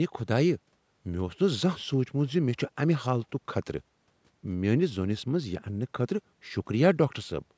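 No technical faults can be heard in this speech; it carries the normal marks of a call's microphone processing, with the lowest bass filtered away and nothing above 8 kHz.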